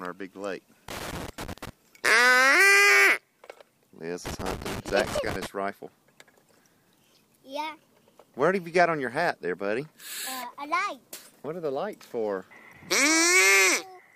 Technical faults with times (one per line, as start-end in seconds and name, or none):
0.88-1.69 loose connector crackle
4.26-5.46 loose connector crackle